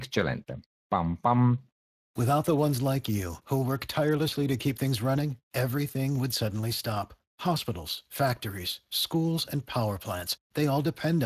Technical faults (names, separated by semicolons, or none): Speex codec